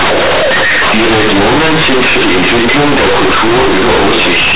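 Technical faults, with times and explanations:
Throughout: companded audio read as linear. The speech was stored as A-law bytes but is being played back as plain linear 8-bit samples, with no expansion. Every sign flip throws the output across roughly half its range, so quiet bits come out as big as loud ones and the waveform gets badly bent. That's the harsh, very loud buzz you hear, and why the pauses are full of strong noise instead of going quiet.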